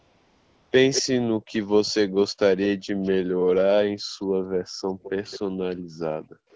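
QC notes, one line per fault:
0.0 to 0.71 s, AMR comfort noise: the clip opens with about 0.71 s in which no speech frames were sent, so the receiver generated a steady, smooth synthetic hiss from a rough description of the background's level and spectrum. It differs from real room sound by being too even and featureless, and from echo-canceller gating because the background is replaced rather than removed, never falling towards silence.
0.94 to 1.02 s, 2.59 to 2.66 s, 3.03 to 3.1 s and 5.03 to 5.39 s, echo leak: a delayed copy of the speech trails the original by 210 ms, loudest near 0.94 s at about 5 dB below the speech, then about 10 dB, about 30 dB, and about 15 dB below. The likely cause is a loudspeaker on one side of the call whose echo canceller let part of the played sound back into its microphone. The fixed 210 ms lag marks it as echo, not reverberation, which would smear continuously.
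1.37 to 1.53 s, 3.36 to 3.47 s, 3.98 to 4.96 s and 5.5 to 6.51 s, background gated by the echo canceller: the room sound drops by as much as about 40 dB, briefly for around 150 ms and 100 ms at first, then for roughly 0.7 s in each of the last two stretches, and comes back when the canceller releases. This is suppression of the microphone while the loudspeaker plays, heard as a hole in the background, unlike comfort noise, which fills pauses with steady hiss.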